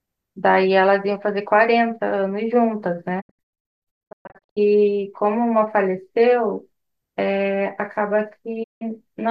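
At 3.20 s the speech breaks up in a digital broadcast dropout. The receiver stops getting clean frames and mutes until good ones return. This lasts until 4.58 s. Silence is scattered in short holes, about 0.9 s in total, and the longest single gap is 144 ms. Each cut fades in 20 ms, which sounds like a quick duck rather than a click. At 8.62 s a second dropout silences 168 ms, ending at 8.83 s. The gap lengths fit 24 ms frames.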